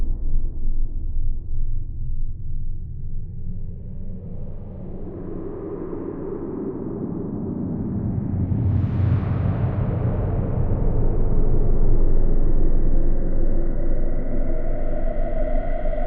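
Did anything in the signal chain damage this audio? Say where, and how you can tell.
No, nothing in the audio stood out on listening as a sign of damage anywhere along the signal chain.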